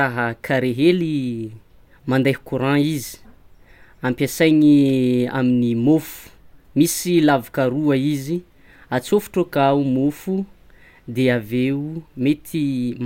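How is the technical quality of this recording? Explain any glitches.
No audible glitches or faults.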